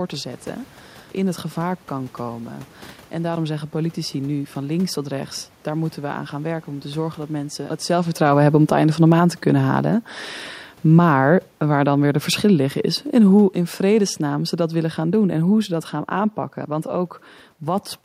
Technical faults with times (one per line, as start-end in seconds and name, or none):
7.89-16.39 automatic gain falling